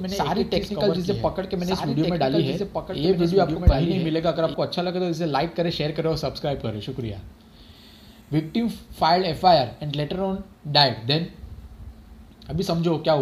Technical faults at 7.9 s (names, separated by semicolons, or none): none